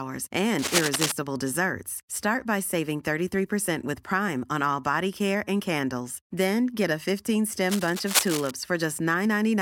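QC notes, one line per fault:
0.59–1.12 s, cable scratch noise: a dense, uneven burst of crackling and rustling sits over the speech at roughly the same level, likely from a worn cable or connector being moved so that its contact resistance jumps rapidly.
7.66–8.51 s, cable scratch noise: the same irregular scratching returns for about 0.85 s, somewhat quieter than the speech, likely from an intermittent contact.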